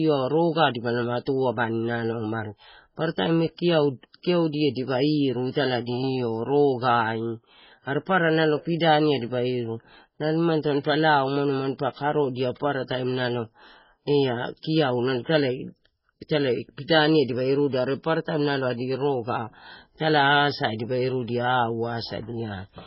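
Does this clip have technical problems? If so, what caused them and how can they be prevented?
Yes. Throughout the speech the sound is watery and swirly, and nothing is present above 5.6 kHz. This is likely heavy MP3 compression at a bitrate that fits roughly 16 kbps. Starved of bits, the encoder cut the treble and kept dropping weak frequency lines in and out from frame to frame. A spectrogram would show a hard ceiling at 5.6 kHz, with speckled, flickering gaps below it. Encoding at a much higher bitrate, or with a codec designed for low-bitrate speech, would prevent it.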